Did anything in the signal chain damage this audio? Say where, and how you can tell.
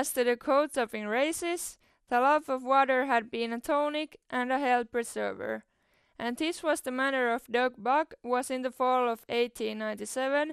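Yes. At the codec stage, the speech sounds dull throughout, with a gurgling, granular texture and upper frequencies flickering in and out. This is likely MP2 compression short of bits, consistent with about 80 kbps: whole upper sub-bands are switched off and the remaining ones are coarsely quantised.

DAB burbling, from the broadcast reception stage, appears from 3.72 to 3.84 s as a brief burst of noise blips in individual sub-bands. Bit errors slipping past error correction corrupt samples and scale factors. The 120 ms span points to about four MP2 frames, fitting a low error rate around 0.1 percent.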